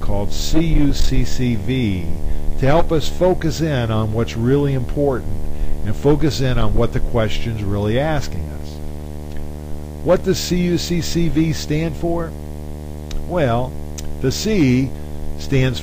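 From start to finish the clip carries video or display buzz, a steady 75 Hz buzz sitting about 15 dB below the wanted sound, with a fizzy hash riding on top of it. A screen or its video cable is coupling interference into the audio path, and the 75 Hz fundamental matches a display refreshing 75 times per second. The buzz is harsh and edged rather than a smooth hum, and it never lets up.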